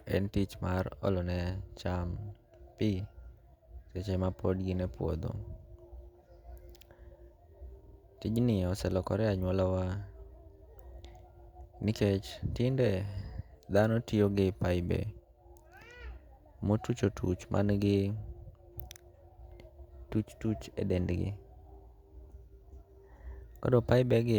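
At 7.86 s the speech stutters: a 50 ms chunk plays, then comes round twice more before things move on, running to about 7.96 s. That's repeated frames. A short run of compressed frames got written or sent more than once, and the decoder dutifully played the same slice again. The 50 ms chunk fits a handful of short codec frames, and the extra passes stretch the clip by 100 ms.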